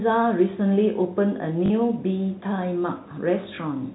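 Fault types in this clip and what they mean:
Packet loss with last packet repeated: a brief robotic stutter for 40 ms at 1.66 to 1.70 s and a small blip for 20 ms at 3.56 to 3.58 s. Missing audio was filled by replaying the last received chunk, which fits 20 ms packets.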